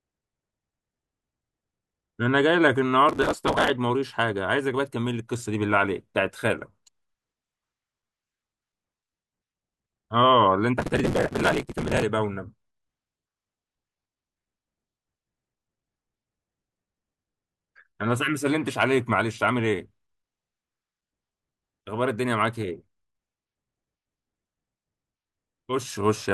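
Processor overload crackle at 3.09 to 3.70 s and 10.78 to 12.02 s: hundreds of very short buffers, around 3 ms each, miss their deadline and are skipped, tearing the speech into gritty crackle.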